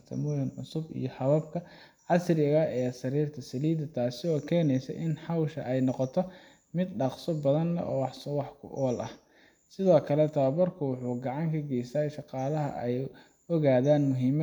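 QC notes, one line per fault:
Nothing to flag here; the speech runs along without a single glitch worth a line.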